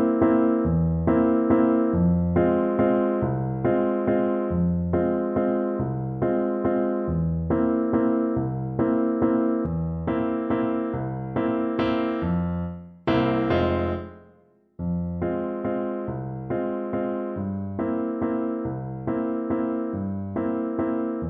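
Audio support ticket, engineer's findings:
Sudden gain jump at 9.66 s. Sound and noise floor drop together by about 6 dB in a single step, no ramp, and stay down to end of clip. Likely digital gain stage: setting change or bit shift applied without smoothing.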